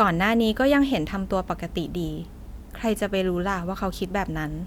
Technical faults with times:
none

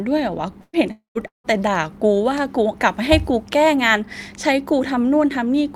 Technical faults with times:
0.61-0.76 burst of packet loss
0.91-1.47 long network dropout

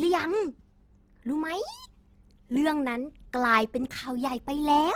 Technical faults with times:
0.00-4.96 Opus compression

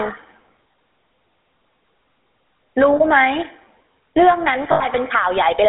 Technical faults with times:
0.00-5.68 gain pumping
0.00-5.68 GSM full-rate codec
0.72-0.74 lost GSM frames
2.96-3.01 lost GSM frames
4.72-4.86 lost GSM frames

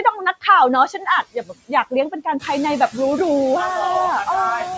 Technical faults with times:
0.00-4.77 noise suppressor artifacts
1.23-1.70 speech cut by the noise suppressor

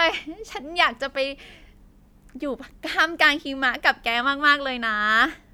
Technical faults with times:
none

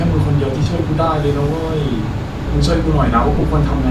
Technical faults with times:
0.63-0.66 lost LE Audio frames
2.45-3.90 mains hum
3.35-3.43 lost LE Audio frames

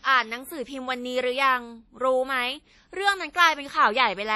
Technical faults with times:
0.00-4.35 WMA compression

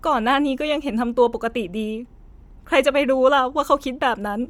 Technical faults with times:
0.00-4.49 Bluetooth LC3 compression

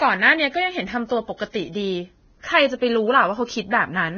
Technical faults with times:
0.00-4.18 Vorbis compression
1.37-1.40 pre-echo

